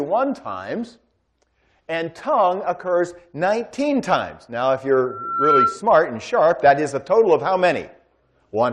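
Loudspeaker feedback squeal runs from 5.03 to 5.84 s, a single 1.4 kHz tone that swells over about half a second and ends up a few decibels louder than the rest of the sound. A microphone is picking up the loudspeaker it drives, and around 1.4 kHz the round-trip gain through that loop exceeds one. That frequency feeds on itself and grows into a squeal until the amplifier limits it or the loop is broken.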